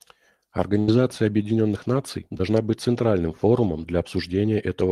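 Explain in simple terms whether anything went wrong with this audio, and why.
From 0.79 to 0.90 s the sound briefly freezes into a stretched, fading sound, then jumps ahead. This is a burst of packet loss: about 80 ms never arrived and was papered over. At 2.38 to 2.41 s, just before "быть центральным форумом", there's a tiny smear. That's short concealed packet loss: 20 ms went missing, and a 14 ms gap was filled in by guesswork.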